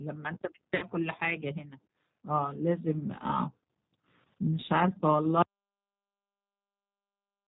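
Throughout, the speech carries G.729 codec damage, a rough, slightly synthetic texture; the spectrogram shows a hard ceiling at 4 kHz, consistent with 8 kbit/s.

From 0.76 to 0.85 s, VoIP packet loss concealed by the speech codec leaves about 60 ms rebuilt from the last frame, consistent with two lost packets. It sounds stretched and fading, with smeared, repeating harmonics on the spectrogram.

From 5.42 s to the end, an audio dropout to silence cuts the sound off mid-flow, likely from a lost input. The waveform goes silent, with no room tone.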